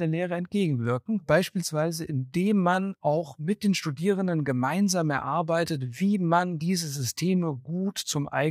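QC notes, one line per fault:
No faults heard.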